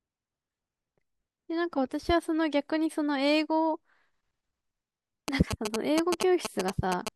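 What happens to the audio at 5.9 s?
GSM signalling bursts run from 5.28 to 7.09 s: a nearby 2G phone's radio bursts are rectified in the circuit, giving a galloping dit-dit-dit of short 217 Hz buzzes at roughly speech level.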